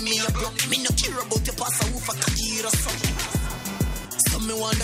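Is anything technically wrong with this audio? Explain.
Yes. From 2.08 s to the end, computer activity noise appears: a buzzy chirping near 500 Hz, roughly 15 dB below the sound. Computer load changes are disturbing the shared audio ground.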